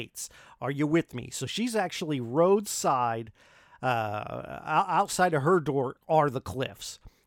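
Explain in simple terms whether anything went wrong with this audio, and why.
Nothing went wrong with this audio, because no fault can be heard anywhere in the recording.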